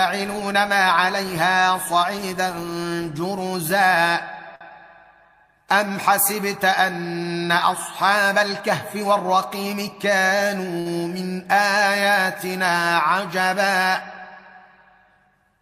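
At 4.55 s a short stall from a late packet holds the sound for about 52 ms. The jitter buffer ran dry, so the last sound was stretched until the packet arrived, and playback resumed where it left off. Nothing is skipped, which separates it from loss concealment; the only trace is a held moment with a slight buzz or dip. From 9.54 to 10.11 s a jitter buffer speed-up plays the audio at 108% while its pitch stays put, unlike a resampling error, which would raise the pitch. Short pitch-period chunks, about 50 ms in all, are trimmed to shed the extra queued delay, so this stretch sounds hurried. At 10.80 s a second stall holds the sound for about 59 ms and then resumes where it left off.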